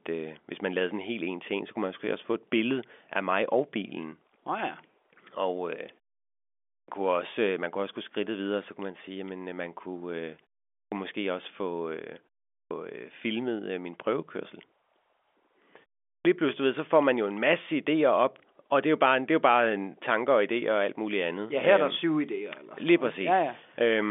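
Speech over a phone line where the G.711 band tops out around 3.5 kHz, with a clipped start after a pause at 6.73, 10.79, 12.57 and 16.11 s. Each time the output device dozes off in silence and swallows about 130 to 150 ms, so "kunne også øh man" and "måske også få øh" and "lige pludselig du ved" jump in already underway.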